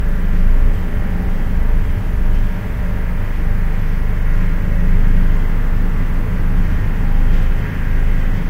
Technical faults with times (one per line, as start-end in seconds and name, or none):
none